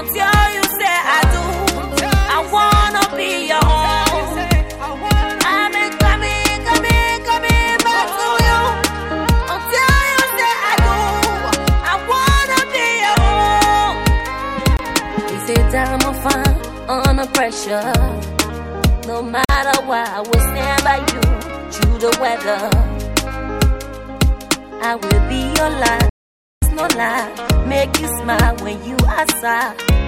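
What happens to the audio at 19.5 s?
The audio drops out abruptly for about 46 ms, from 19.45 to 19.49 s, a short hole. This is a block of digital silence: samples were replaced by zeros with no fade, which fits a 2048-sample buffer.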